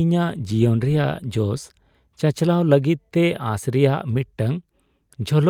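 Speech recording with no audible technical faults.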